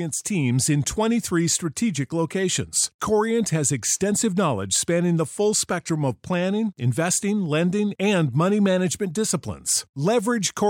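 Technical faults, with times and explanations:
7.46 s, dropped samples: a single sharp click in the speech, seen as a thin vertical line across the spectrum. It is likely caused by a fraction of a millisecond of samples missing from the stream, so the waveform jumps straight from one value to a later one. That step in the signal is what clicks. Unlike a dropout, no stretch of sound is silenced or lost, and unlike repeated crackle, it happens only once.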